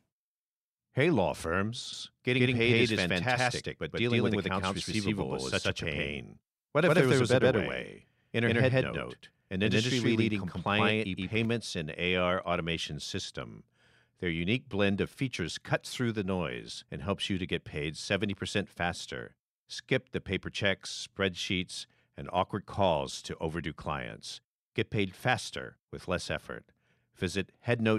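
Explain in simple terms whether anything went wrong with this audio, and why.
From 1.93 to 11.45 s the speech is heard twice, with an equally loud copy trailing about 0.15 seconds behind, then it abruptly stops. This is a doubled audio track, likely the same sound captured again through a slower second path.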